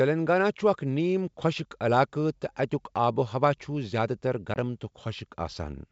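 At 4.54 s comes a hard-edged 20 ms hole, packet loss on an ADPCM call, about one packet. The decoder's predictor and step size drift from the sender's, so speech returns slightly distorted: a flat waveform gap, a blank spectrogram stripe.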